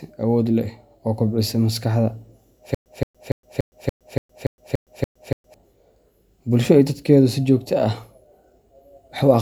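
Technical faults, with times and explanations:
2.75–5.54 s, stutter with silent gaps: the speech stops advancing and a single fragment of about 173 ms repeats 10 times, each followed by about 114 ms of digital silence, giving an even cycle of about 287 ms. This is likely a stalled player or stream that replays its last buffered fragment on each retry and then runs empty. The speech that belonged in this span is lost.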